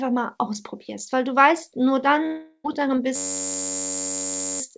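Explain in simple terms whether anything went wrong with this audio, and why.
A long network dropout hits from 2.26 to 2.69 s. Audio likely stopped arriving, so the receiver stretched the last sound into a fading buzz for about 0.38 s, then a brief silence, and the sound resumed with that stretch missing.

A system hang loop runs from 3.16 to 4.61 s. The computer froze while the sound hardware kept replaying one 10.67 ms slice of audio, 136 times in a row. That rapid repetition comes out as a steady buzz at about 94 Hz, which fits a 512-sample buffer.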